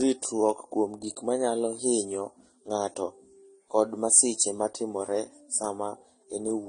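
A speech clip that carries transcoding between lossy codecs from start to finish, likely a Vorbis encode at around 47 kbit/s re-encoded as AAC-LC at around 32 kbit/s. Nothing survives above 9.9 kHz, the lowest cut-off in the chain, so the top end is dull throughout. What separates this from a single low-bitrate encode is the layering: two different kinds of smearing and swirly artefacts sit on top of each other, because the second codec wastes bits re-coding the first one's damage.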